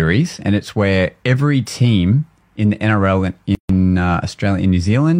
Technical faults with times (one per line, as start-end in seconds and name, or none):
3.55-3.69 gap at a join of encoded pieces